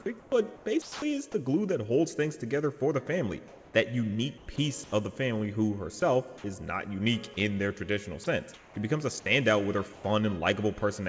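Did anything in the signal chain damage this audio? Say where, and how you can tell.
Yes. Call processing: comfort noise in place of the background at 0.2–1.0, 3.5–4.9, 8.2–8.8 and 9.9–10.0 s. Real ambience turns steady and featureless, likely from discontinuous transmission.

Sound dropped by the voice detector at 0.82–1.02, 4.56, 6.00 and 8.24 s. Brief sound gives way to flat noise, likely misjudged as background and not sent.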